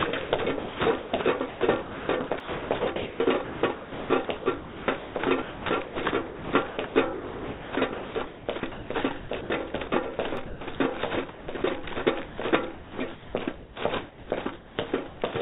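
From 0.23 to 10.79 s the sound is chopped by the voice detector: the sender likely toggled transmission repeatedly, so about 5.1 s of quieter content was replaced with comfort noise. Within that stretch, a block of digital silence at 2.40 s leaves a 2.7 ms hole with hard edges, which fits a 128-sample block, and a second one at 10.37 s, lasting 0.67 ms, is heard as a tick. The same chopping returns from 11.3 to 13.34 s, with about 0.84 s replaced, and from 14.09 to 15.2 s, with about 0.54 s replaced. Throughout, the G.711 call path band-limits the sound to nothing above 4 kHz.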